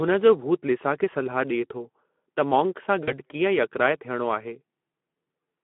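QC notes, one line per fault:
Throughout: Speex codec, speech sounds hoarse and noisy, confined to a 200 Hz to 3.4 kHz line band, with plainly audible CELP coding damage, consistent with roughly 11 kbps.
3.04 to 3.16 s: VoIP packet loss concealed by the speech codec, a brief, fading smear where 40 ms of audio went missing and the decoder extrapolated the last pitch and filter.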